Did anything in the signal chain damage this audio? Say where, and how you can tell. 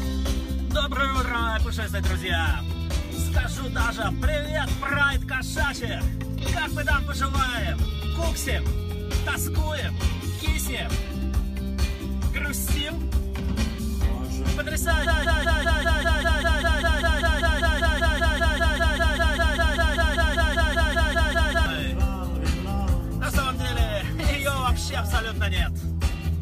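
Yes. A broken-record loop runs from 15.06 s to 21.66 s. The same 0.2 s fragment repeats back to back, identically each time, 34 times in a row, so the sound stutters in a fixed rhythm for over six seconds. The likely cause is a stall at the playback or buffer stage, which kept re-issuing the last block it held. Whatever should have been heard in that span is gone.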